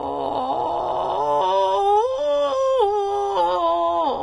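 A music clip with plainly audible damage throughout that points to Vorbis compression, likely at a low setting consistent with roughly 30 kbps. Nothing is present above 10.6 kHz, so the top octave is simply gone. Below that limit, the treble sounds hissy and grainy because fine high-frequency detail has been quantised into noise of similar energy. Tones take on a rough texture, and attacks lose their edge and sound smeared.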